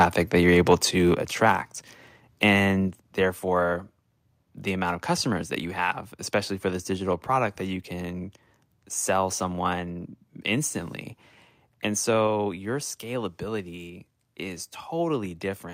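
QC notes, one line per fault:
0.00–0.04 s, microphone overload: the opening peak sounds flattened and crackly, about 4 dB over, likely from input volume driving the converter past its limit.
1.14 s, microphone volume stepped down: voice and background drop together by about 6 dB in one step, likely as the input volume is lowered abruptly.
1.46–1.50 s, microphone overload: another harsh, crackling peak, about 2 dB over, with only a small share of samples squared off at the converter ceiling.
2.88 s, microphone volume stepped down: a second sudden drop of about 4 dB across voice and background, likely again an abrupt cut to input volume after distortion.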